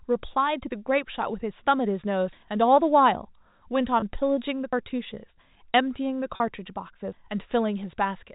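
At 2.33 s the speech jumps forward, dropping about a tenth of a second with the edges butted together. The same skip recurs at 4.73 s and 7.13 s. This is likely audio missing between chunks, lost as the recorder hands off between fixed chunks.

At 4.00 s a 20 ms gap, and at 6.36 s a 40 ms gap, are each filled by a held, faintly buzzy tone. This is packet loss with pitch repetition: the receiver loops the last pitch period to cover the missing packets on this band-limited G.711 telephone path.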